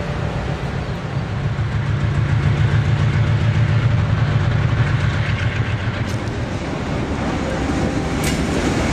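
A skip ahead occurs at 3.83 to 3.85 s: a stretch of audio never reached playback, either lost in transit or discarded by the receiver's jitter buffer when it overflowed, while later audio was already queued. Roughly a second of sound is missing, and nothing fills the hole. The material on either side is butted together with no pause, so the sound lurches abruptly forward mid-flow. Immediately afterwards, from 3.87 to 5.34 s, a jitter buffer speed-up follows as the receiver, still holding more audio than it targets, repeatedly cuts out pitch-period-length slivers to drain the excess and pull latency back down. About half a second is removed this way, so this stretch plays at 130% speed while keeping its original pitch, giving it a rushed, compressed quality until normal pacing resumes after 5.34 s.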